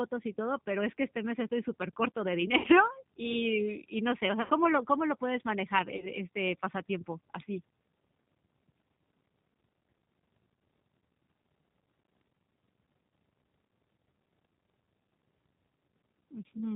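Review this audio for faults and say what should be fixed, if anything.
Throughout the speech, the sound is band-limited, slightly rough and synthetic, with nothing above 4 kHz. This is the G.729 codec, here the G.729A variant at 8 kbit/s, rebuilding each 10 ms frame from a vocal tract filter, pitch predictor and a few pulses, so the damage is plainly audible. Prevent it by using a wideband codec such as G.722 or Opus.

At 0.33–0.36 s, 2.58–2.67 s (after "mes estoy supercorto de", before "y y no sé"), 4.42–4.52 s (after "y no sé o", before "lo cómo lo puedes") and 5.97–6.11 s (after "cómo lo puedes manejar", before "este pasatiempo así"), the speech smears into a fading buzzy tone or coloured noise. This is VoIP packet loss concealed by the speech codec. About 40, 60, 80 and 20 ms of audio went missing, and the decoder extrapolated from its last pitch and filter, so the voice stays weak briefly after each gap. 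Prevent it with a more stable network path, QoS priority for voice and a jitter buffer.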